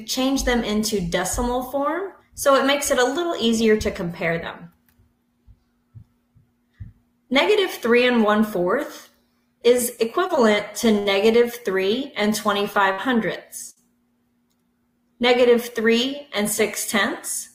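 The audio has three network-delivery faults in its second half. Repeated stalls (stutter) run from 10.27 to 11.09 s. Packets arrived late three times, and each time the jitter buffer ran dry. The receiver extended the last sound to bridge each gap, the longest being 69 ms and the three totalling 104 ms. Nothing is lost, but the audio drags and hitches. Repeated packet loss (robotic sound) follows from 12.73 to 13.79 s. Three holes, the longest 64 ms, were patched by continuing the preceding sound for 130 ms in all, and about 120 ms of real material is gone. The result is choppy. From 15.27 to 16.41 s, a jitter buffer speed-up plays the audio at 103% speed without changing pitch. The receiver had built up excess buffered audio and trimmed short pitch-period pieces repeatedly, around 40 ms in total, so this stretch runs slightly fast.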